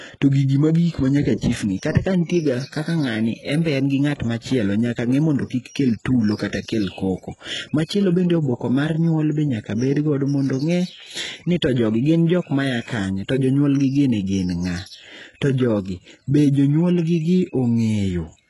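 Throughout the speech, s sounds turn gritty and metallic, and the treble stays bright, not dull as with a low-pass, yet stops at 11.5 kHz: likely heavy HE-AAC compression near 12 kbps.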